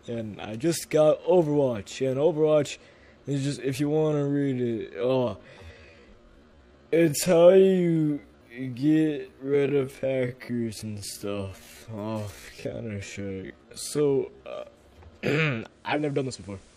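From 3.85 s to 14.71 s the pace drops to about 0.54 times normal while pitch holds steady. This is likely a time-stretched section; a slowed tape or wrong sample rate would drag the pitch down too.

At 15.65 s the digital radio blends to analogue FM over about 0.45 s. Hiss rises to roughly 30 dB below the signal, and level falls about 3 dB. The gradual cross-fade and added hiss distinguish it from a simple filter change.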